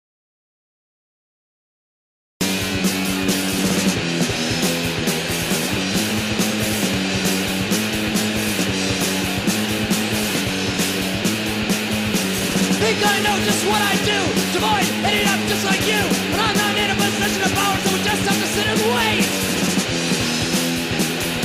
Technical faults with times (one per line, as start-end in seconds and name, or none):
0.00-2.41 audio dropout to silence